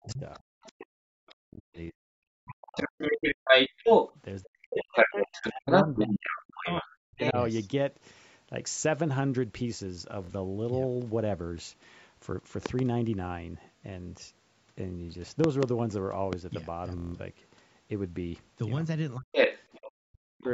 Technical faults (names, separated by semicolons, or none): speech suppressed in double talk; other side's voice leaking through; Bluetooth stutter; loud pop